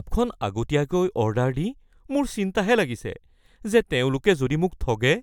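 No technical faults can be heard anywhere in the recording. There is nothing to mark on the timeline.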